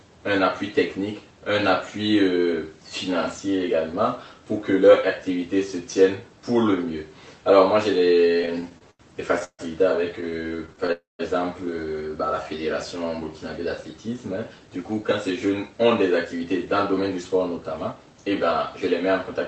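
From 8.37 to 9.01 s the audio shows repeated stalls (stutter): eight short gaps, the longest 86 ms, patched by stretching the preceding sound, so about 28% of that stretch is filler. Packets reaching the receiver more slowly than playback kept draining the jitter buffer.

At 9.44 s a call audio freeze lasts 145 ms. The last sound is held as a fading buzz that ends in about 60 ms of silence, then the audio resumes exactly where it stopped. This is likely caused by packets held up in transit. A single longer hold separates it from the choppy stutter.

From 10.21 to 10.90 s a second stutter follows, with nine briefer gaps of at most 25 ms covering 16% of the span.

At 10.92 s a second freeze runs 269 ms, with 160 ms of it silent before playback continues.

From 14.53 to 15.85 s and again from 16.25 to 18.23 s a jitter buffer speed-up plays the audio at about 110% and then 109% of normal speed. 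Roughly 150 ms and then 200 ms are removed in tiny pitch-period slices. The sound is hurried, but its pitch stays the same, unlike a faster playback clock, which would raise it.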